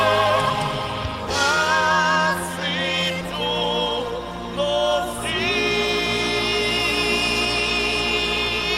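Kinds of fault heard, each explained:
No audible faults detected: signal path checks out with no dropouts, distortion, level problems or timing errors.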